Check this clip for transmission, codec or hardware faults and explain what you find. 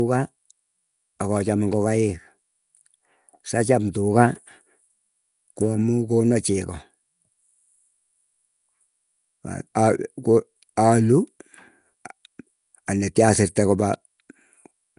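There is one fault, and it runs through the whole recording.

Nellymoser compression, throughout: the speech has a rough, hissy halo and a smeared, underwater character. The likely cause is the Nellymoser Asao codec, which codes short blocks at a fixed two bits per sample and fills weaker bands with noise instead of signal. The damage is plainly audible and fits a bitrate of about 44 kbps. Nothing remains above 10.6 kHz.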